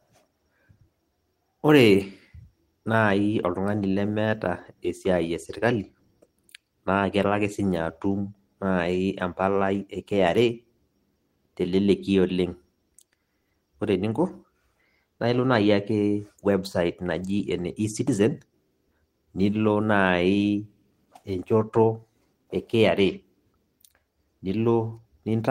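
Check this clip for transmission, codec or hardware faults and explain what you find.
No faults found in this clip.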